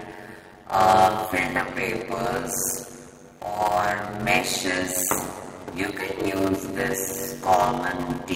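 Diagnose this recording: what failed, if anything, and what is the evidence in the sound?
A block size mismatch (padded) at the driver or buffer stage, present throughout. There's a steady 93.8 Hz buzz, and the sound plays at 0.625 times normal speed with timbre intact. That fits 512-sample reads only part-filled, zero-padded, gapping every block.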